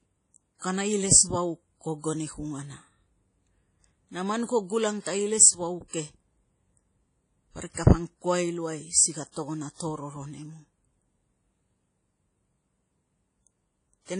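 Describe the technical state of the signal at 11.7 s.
At 11.7 s the speech sounds washy and ringing, with a thin hiss that swells and fades along with the voice, and the top end is missing, with nothing above about 10.1 kHz. This runs through the whole clip. The likely cause is WMA compression: a transform codec working in long blocks smears its quantisation noise over tens of milliseconds and drops weak high lines, which points to a low bitrate of around 32 kbps.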